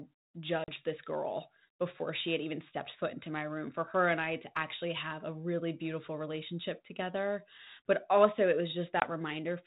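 Packet loss on an ADPCM call hits twice: a hard 40 ms hole at 0.64 s before "this girl before she", and a 20 ms hole at 9.0 s after "also it". Each time the decoder's predictor loses sync, so the audio returns slightly distorted.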